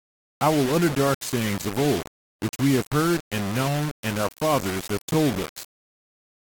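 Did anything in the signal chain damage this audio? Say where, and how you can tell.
Yes. Throughout the speech a coarse, grainy distortion rides on the signal and shifts with it, sitting only about 10 dB below the level, with quiet tails breaking up. That points to sample-format conversion, likely rounding to about 4 bits: low bit depth without dither.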